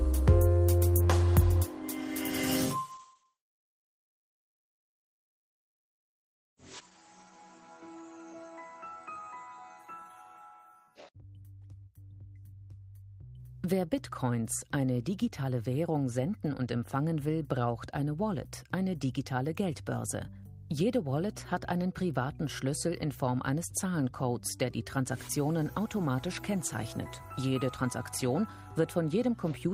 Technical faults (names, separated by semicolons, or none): call bitrate drop